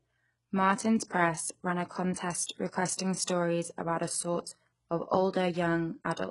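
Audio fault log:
throughout HE-AAC compression, likely: treble is rebuilt from copied lower bands, heavy enough to suggest about 12 kbps, so s sounds turn gritty and metallic, with nothing above 11.1 kHz.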